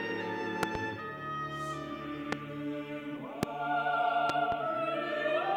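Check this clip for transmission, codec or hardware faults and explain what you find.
Loud pops occur four times: a double pop at 0.63 to 0.78 s, single pops at 2.32 to 2.35 s and 3.43 to 3.45 s, and another double pop at 4.29 to 4.55 s. Each is likely a sudden voltage step or pulse from a connector, switch, static discharge or driver glitch. The downstream circuitry turns it into a sharp thump peaking about 20 to 25 dB above the surrounding audio, which continues underneath.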